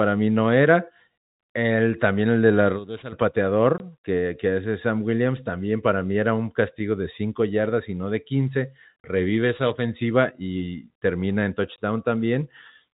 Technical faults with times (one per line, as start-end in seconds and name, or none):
2.49-3.22 loudspeaker feedback squeal
3.78-3.80 packet loss filled with silence
8.07-10.27 loudspeaker feedback squeal
9.00-9.04 packet loss filled with silence
11.76 packet loss filled with silence